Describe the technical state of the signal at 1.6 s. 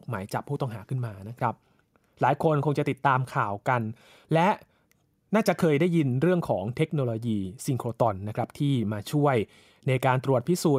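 At 1.6 s the signal is intact, with no audible technical fault.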